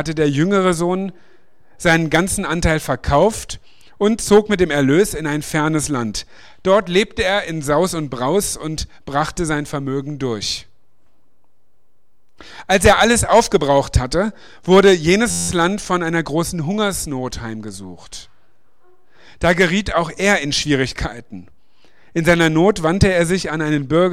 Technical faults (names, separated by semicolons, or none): system hang loop